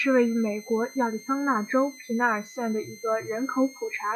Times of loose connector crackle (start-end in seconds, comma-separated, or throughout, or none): none